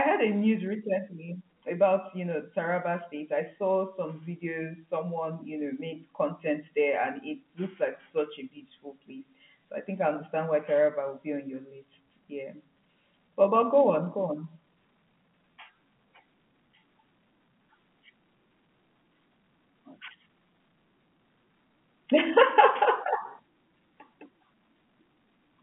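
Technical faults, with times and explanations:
No technical faults heard.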